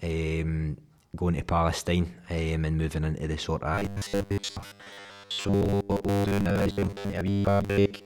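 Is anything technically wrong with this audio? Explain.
Yes. From about 3.75 s right to the end at 8.06 s, the speech turns into robotic sound from repeated short buffers. You hear a stiff, metallic buzz pinned at 100 Hz that still loosely tracks the talking. That pitch points to the playback likely looping the last 10 ms chunk whenever fresh audio didn't arrive in time, with repeats filling most of the stretch while the real audio in between gets skipped.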